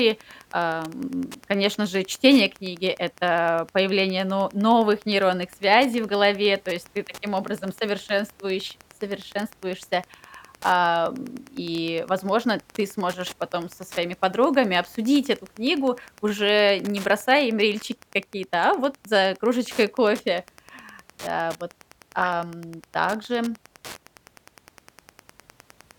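A nearby Wi-Fi radio is coupling into the audio circuit, which rectifies its transmissions. This Wi-Fi interference runs throughout the speech as a steady tick every 102.4 ms, just under ten per second. It sits well below the speech, roughly 25 dB down.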